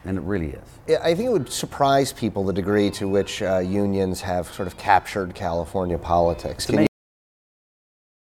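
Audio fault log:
6.87–8.35 s, cut-off end: the sound stops abruptly at 6.87 s, partway through, and drops straight to digital silence with no decay. The final stretch of audio was never written or played out. Nothing fills the remaining 1.5 seconds.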